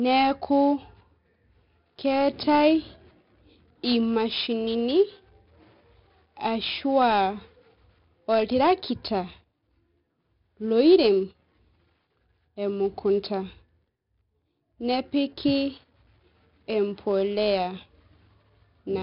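Throughout, the speech carries 4-bit ADPCM compression damage, heavy enough to suggest roughly 44 kbps. Each sample is coded as a coarse step from a prediction, so gritty hiss rises and falls with loud sounds and crackles on attacks, unlike steady background noise. Nothing sounds above 5.3 kHz.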